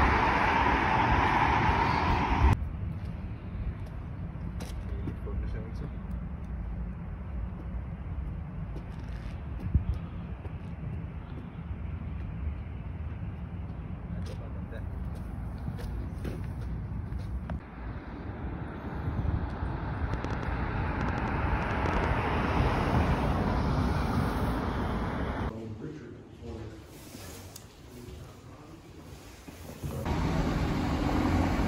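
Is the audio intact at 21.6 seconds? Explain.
No. A train of clicks runs from 20.14 to 22.05 s: around fifteen similar pulses, about 7.9 per second at uneven spacing, standing well above the sound. It is likely caused by nearby interference or a faulty connection or power supply. Unlike random crackle, the clicks keep one shape.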